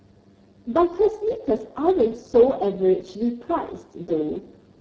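Throughout, the speech passes through the Speex codec at a very low setting, starving the excitation of bits, consistent with roughly 6 kbps, so it sounds hoarse and noisy.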